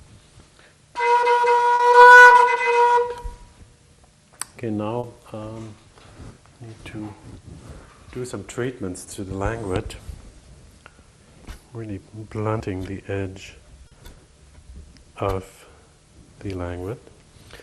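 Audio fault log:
1.75–1.82 s, 4.99–5.06 s, 13.87–13.94 s: short concealed packet loss. Each time, about 40 ms of audio failed to arrive in time, and the receiver covered the gap by extending the preceding sound, either from its pitch or as shaped noise, before blending back into the real signal. This is heard as a brief smear or wobble. On a spectrogram, the harmonics or noise band stretch flatly across the gap. On the waveform, a short repeated or smoothed stretch appears.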